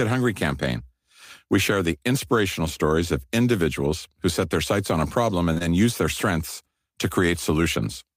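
Two consecutive stretches of the speech arrived too late for the decoder, right after "sights on a problem": short concealed packet loss at 5.53 to 5.58 s and again at 5.58 to 5.62 s. The receiver extended the preceding sound before blending back, leaving a brief smear just before "use their strengths to".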